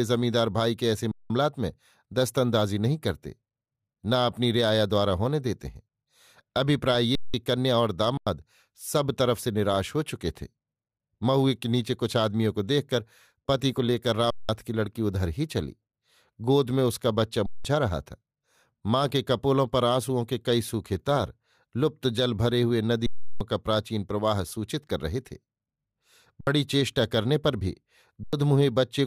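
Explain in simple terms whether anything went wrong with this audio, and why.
The playback system kept running out of data, a fault called an underrun with held sample. The output froze on its last value each time, so the speech cuts to flat silence for about 0.06 to 0.34 s, then returns with a short piece skipped, at 1.12, 7.15, 8.17, 14.30, 17.46, 23.06, 26.41 and 28.24 s.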